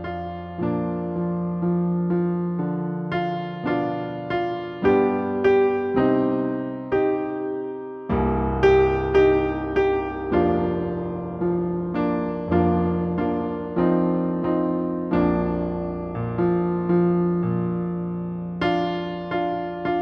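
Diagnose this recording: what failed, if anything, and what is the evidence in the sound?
Nothing failed; no faults heard.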